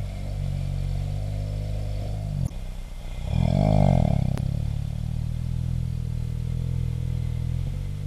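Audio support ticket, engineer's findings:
Damaged data in a compressed stream: short glitches at 2.45 to 2.51 s and 4.35 to 4.39 s. Probable component: decoder input. Corrupted frames are misread, sync lost, decoder hunts for the next valid frame header before clean output resumes.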